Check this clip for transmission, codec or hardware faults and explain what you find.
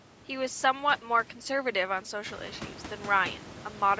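No transmission, codec or hardware faults turn up anywhere in this clip.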